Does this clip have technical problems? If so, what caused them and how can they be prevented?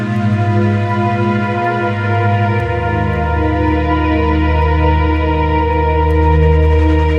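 No, the music shows no audible technical faults, so there is no cause to trace and nothing to prevent.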